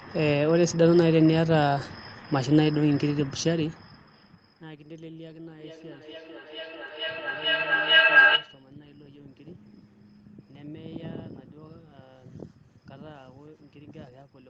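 From 5.6 s to 8.7 s there's a feedback howl. Two devices on the call are feeding mic to speaker and back, gaining level each trip. It narrows to a tone around 1.5 kHz, with repeats roughly every 0.4 s, and peaks about 3 dB above the speech.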